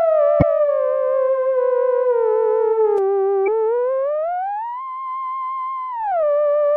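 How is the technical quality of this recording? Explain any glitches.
The recording has three faults: coding damage throughout, a doubled track in its first three seconds, and two brief glitches from damaged stream data.

Likely MP3 compression runs through the whole clip, and its damage is plainly audible. The texture fits a low bitrate of around 64 kbps. At that rate the encoder cannot spend bits on every frequency line, so it drops weaker ones. Those components flicker in and out from frame to frame, giving the sound a watery, swirly quality, and sharp onsets lose their definition.

A doubled audio track is already present when the clip starts and continues until 2.98 s. A second full-band copy of the sound trails the original by roughly half a second and sits about 5 dB lower. This pattern points to the same signal being captured twice through a slower path, or to an edit holding two misaligned copies. 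The copy has no reverberant tail or room colouring, and it cuts off abruptly at 2.98 s.

Damaged data in a compressed stream disrupts playback twice, from 0.38 to 0.43 s and from 3.44 to 3.48 s. At each point the compressed stream was corrupted. The decoder misread or rejected the affected frames, lost its place, and had to search for the next valid frame header before playback could resume. Each event is a short burst lasting about 40 ms, heard as a chirp, squawk, click or brief gap in the sound.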